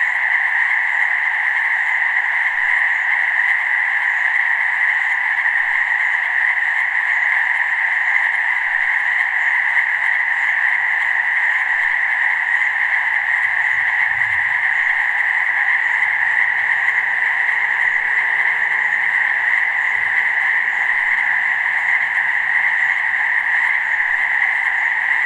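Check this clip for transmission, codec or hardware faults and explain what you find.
No transmission, codec or hardware faults.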